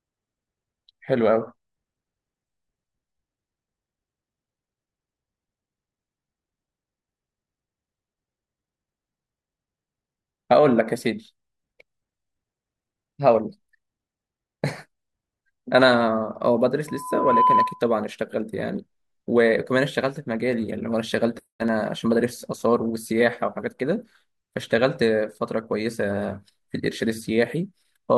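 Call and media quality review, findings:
Loudspeaker feedback squeal, 16.87–17.84 s: 1 kHz tone swells over half a second, ending above speech; mic–speaker loop gain exceeds one. Spectrogram: lone bright horizontal line.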